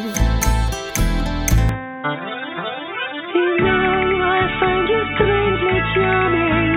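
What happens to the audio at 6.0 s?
At 6.0 s you're still inside a narrowband stretch that starts at 1.69 s and runs to the end. It's likely an input switched to a poorer device: nothing above 3.8 kHz, a dull, boxy tone, a faint new noise floor, and roughly the same level, with no gap at the switch.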